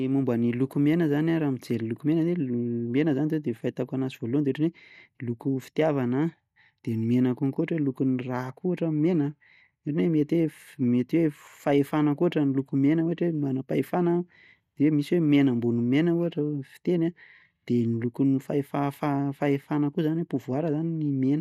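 From start to finish the speech sounds dull and muffled, with a gurgling, grainy roughness that flickers as the upper frequencies drop in and out. The likely cause is MP2 compression: MPEG Layer II divides the signal into 32 equal sub-bands and shares out bits among them, and when bits run short it shuts off the top bands and quantises the remaining ones coarsely. The plainly audible damage fits a low rate of around 80 kbps.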